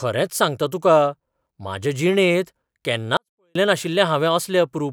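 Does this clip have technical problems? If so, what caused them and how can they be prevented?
Yes. From 3.17 to 3.55 s the speech drops by about 48 dB and becomes nearly inaudible while staying clean. This is a 24-bit alignment error (too quiet): 24-bit samples sitting in the low bytes of 32-bit words were read as full 32-bit integers, so every value shrank by a factor of 256. On a waveform the envelope collapses to a thin line for those 0.38 s. On a spectrogram the same harmonic pattern stays but is far dimmer. To prevent it, declare the container's sample format and justification explicitly and have the reader check that they match.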